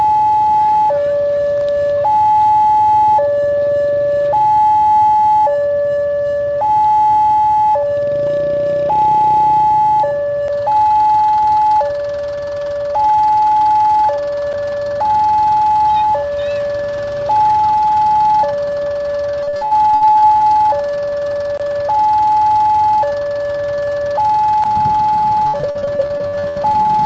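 From 19.43 to 20.42 s, and again from 25.48 to 26.91 s, there's repeated packet loss giving that robotic sound. Short holes of up to about 67 ms keep getting patched by stretching the last bit of audio, so it turns choppy and robotic with pieces missing.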